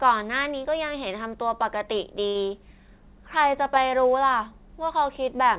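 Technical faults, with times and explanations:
2.28 to 2.37 s, short stall from a late packet: a packet arrived late and the jitter buffer ran dry, so the receiver held the last bit of sound for about 69 ms, stretching it out with a faint buzz or dip, then picked up exactly where it left off. Nothing's actually lost, but everything after sits about 69 ms later. The narrowband tone, with nothing above 4 kHz, fits a G.711-style call path.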